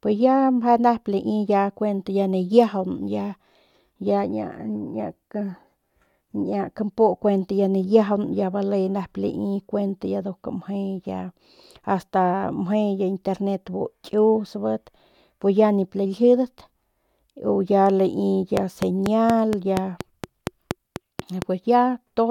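From 18.57 s to 21.43 s a steady ticking rides over the speech, a train of clicks arriving at an even 4.2 per second, around fifteen in all, each much the same sharp pop and standing out roughly 15 dB above the speech, so they remain plain through the pauses too. Such a regular, repeated pulse points to something outside the audio itself, likely electrical interference from nearby equipment or a faulty connection or power supply.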